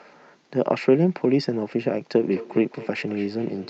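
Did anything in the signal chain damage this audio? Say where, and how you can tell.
Yes. From 2.2 s to the end, the speech is followed by faint repeats at about a fifth of a second, roughly 18 dB below the speech. That is feedback echo between two devices, a call-processing fault. A second device in the room replays the call and this microphone picks it up again, but the local echo canceller removes only its own device's output. On a spectrogram, each syllable gets fainter copies at that regular spacing, and the waveform shows small trailing bursts.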